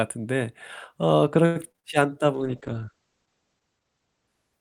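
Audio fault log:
1.45–1.85 s, repeated packet loss (robotic sound): In under half a second the speech breaks up into four separate holes. The receiver fills each one by stretching the last sound it had, so about 45% of the span is patched, roughly 180 ms in all. Another 80 ms is left empty, and the longest gap lasts about 100 ms. That gives a choppy result with pieces missing. A spectrogram shows smeared, repeated harmonic stripes broken by short blank columns. The waveform shows repeated cycles and drop-outs.
2.35 s to end, call bitrate drop: From here the speech turns rough and muffled. The texture points to the encoder falling from around 40 kbps to roughly 9 kbps, which means far coarser coding. The top of the audio band also drops from 20 kHz to 8 kHz. The dullest stretch lasts about 1.19 s. On a spectrogram the energy above 8 kHz stops abruptly, and the lower bands look blotchy and watery. 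The waveform changes little, apart from a slightly softened outline.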